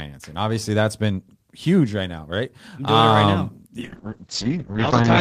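From 3.81 s to the end at 5.2 s, a call bitrate drop makes the speech coarse and watery, consistent with the encoder falling from roughly 32 to 7 kbps. The top end also narrows from 20 kHz to 8 kHz. Unlike a plain low-pass filter, it adds coding roughness.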